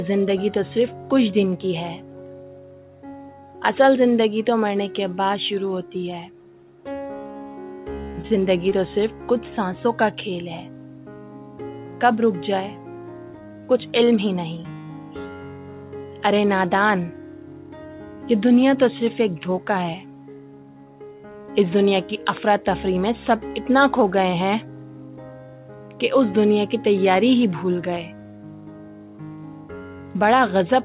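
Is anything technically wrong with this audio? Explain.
Yes. Three brief glitches sit close together near 8 seconds, and they are two different faults. The sound also stops at 4 kHz, as expected from a narrowband G.711 mu-law call path.

Short concealed packet loss occurs at 8.12 to 8.16 s and again at 8.70 to 8.73 s. Each time, about 20 ms of audio never arrived. The receiver covered the first gap with 20 ms and the second with 12 ms of invented continuation, extending the preceding sound's pitch or noise, then crossfaded back. Because real material is lost, it comes across as a quick smear or wobble, and a short sound can disappear.

A short stall from a late packet occurs at 8.27 to 8.32 s. Here the jitter buffer ran dry because a packet came about 29 ms late. The receiver held the last sound for 29 ms until it arrived, then resumed exactly where it left off. What sets it apart from the losses is that nothing is missing. 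Instead, a sound lingers slightly too long, with a faint buzz or dip, and the timing after it shifts later.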